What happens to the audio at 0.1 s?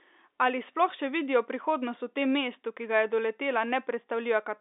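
Nothing goes wrong at 0.1 s; the speech there passes intact through the G.711 telephone coding, whose narrow line band holds nothing above about 3.7 kHz.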